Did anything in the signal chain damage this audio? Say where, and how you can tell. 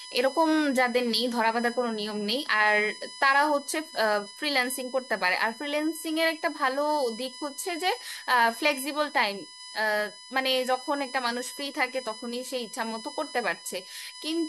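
Yes. A USB whine runs through the whole speech clip, entering at the analogue stage through power or ground wiring shared with the USB bus. It is a steady tone built on a 1 kHz fundamental, loudest at its fifth harmonic, 5 kHz, and sits roughly 15 dB below the speech. The 1 ms USB frame cycle pulls current in regular bursts, and that ripple reaches the audio path. Mains hum would instead sit at 50 or 60 Hz and its multiples.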